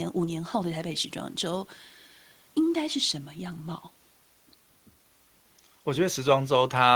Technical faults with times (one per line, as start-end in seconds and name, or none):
none